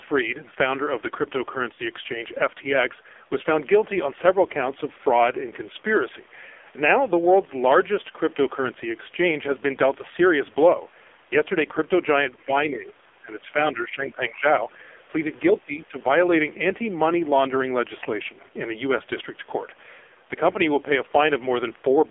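Throughout, the speech carries heavy AMR narrowband mobile codec damage: a buzzy, synthetic tone that fits a low mode near 5.9 kbps. On a spectrogram, energy sits only between 300 Hz and 3.5 kHz, with a hard ceiling and smeared, blocky harmonics.

From 1.74 to 1.81 s, lost AMR speech frames appear. The decoder replays its last pitch and vocal tract settings at falling gain, heard as a brief warbling dip. The waveform shows a short, fading stretch of repeated cycles, which points to two lost frames.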